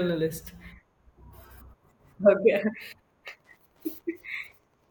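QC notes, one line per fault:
3.3 to 4.9 s, Wi-Fi interference: a steady tick comes in at 3.3 s and runs to the end, roughly ten ticks a second, sitting very low, something like 45 dB under the speech. That spacing fits a Wi-Fi beacon going out every 102.4 ms. A radio near the audio circuitry is leaking in, and the circuit rectifies the RF so each beacon burst lands as a small click.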